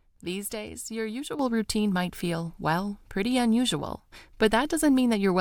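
Speech with a sudden gain jump at 1.39 s, right after "days your". Voice and background noise rise together by about 8 dB and stay there, likely from an unramped gain change.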